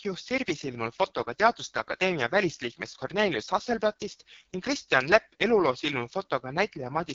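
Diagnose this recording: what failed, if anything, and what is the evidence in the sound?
Codec stage: AMR wideband (HD Voice) codec damage throughout. The speech sounds rough and raspy, with nothing above 7.5 kHz, which points to the lowest 6.6 kbit/s mode.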